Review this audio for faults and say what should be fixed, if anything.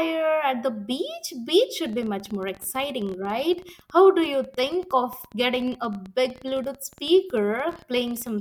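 A train of clicks runs from 1.86 s to 8.30 s: about a hundred sharp, similar-shaped ticks at roughly 14.9 per second, unevenly spaced and peaking about as loud as the speech, so they are plainly audible both over the talking and in the pauses. The likely cause is a repeated electrical pulse, either interference from nearby equipment or a faulty connection or power supply. Keep other equipment away from the recording chain and use a stable, properly powered interface.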